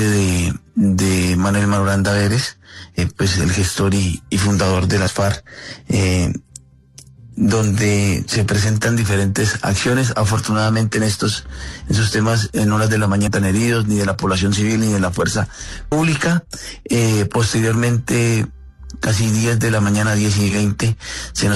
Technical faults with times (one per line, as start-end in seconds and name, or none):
2.97 damaged data in a compressed stream
13.26 damaged data in a compressed stream
15.91 damaged data in a compressed stream
19.07 damaged data in a compressed stream